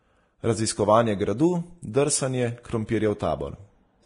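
Vorbis compression, likely, runs through the whole speech clip. Nothing survives above 10.6 kHz, and the remaining treble is so coarsely quantised that its fine detail turns to grainy hiss, with roughened tones and smeared attacks. The heavy damage points to a low bitrate around 31 kbps.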